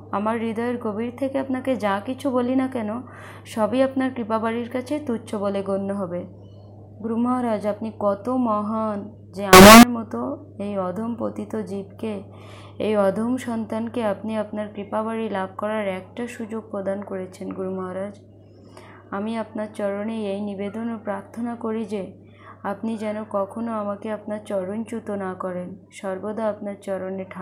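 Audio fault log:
9.53 to 9.83 s, float read as integer: for 0.3 s the sound becomes extremely loud and harsh. The waveform flattens into a near-square shape at an almost fixed, high level, and background noise jumps to the same level as the main signal. Pitch stays traceable. Likely cause: 32-bit float samples read as 32-bit integers, so sign and exponent bits dominate each value.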